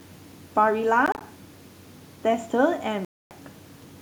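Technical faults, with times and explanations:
1.06–1.21 s, Bluetooth dropout: The speech breaks into several short silent gaps, about 73 ms lost across 145 ms, the longest about 29 ms. This is likely wireless packets arriving too late and being discarded. The waveform shows flat-line slivers, and the spectrogram shows thin vertical blank stripes.
3.05–3.31 s, Bluetooth dropout: A single silence of about 0.26 s, likely from a longer packet loss. Sound resumes further on, as if it had played through the gap, leaving an empty block across all frequencies.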